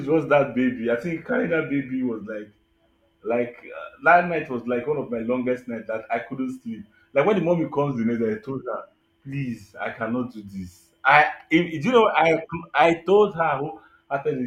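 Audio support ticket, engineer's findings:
Speech slows 6% and drops about a semitone, 7.96–9.01 s, after "when the mommy comes" until "please I cannot do"; runs 6% fast, a semitone sharp, 12.83–13.34 s. Likely drift correction step: clock-sync resampler stepping rate to rebalance buffer.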